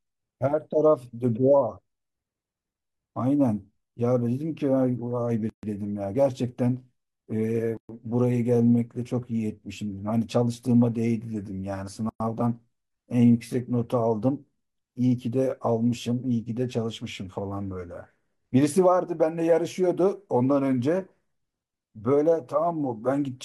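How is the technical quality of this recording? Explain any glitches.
The speech is interrupted three times by a gap at a join of encoded pieces: at 5.50 to 5.63 s (136 ms), 7.77 to 7.89 s (120 ms) and 12.09 to 12.20 s (109 ms). Separately encoded segments were spliced without trimming each encoder's leading delay and final-frame padding, so brief silences cut into continuous speech, which then resumes where it stopped. Waveforms show flat stretches; spectrograms show full-height blank bands with smeared edges.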